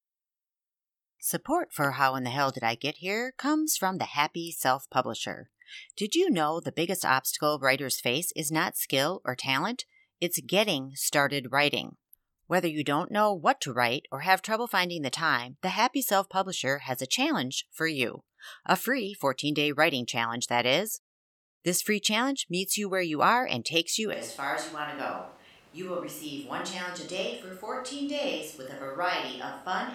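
At 24.13 s, just after "are and takes you", the close microphone's signal likely drops out and the recording falls back on a switch to a distant microphone, which stays in use to the end. The speech suddenly turns roomy and hollow, with thinner bass and a level about 10 dB lower. Background room noise, only about 25 dB below the speech, becomes more noticeable.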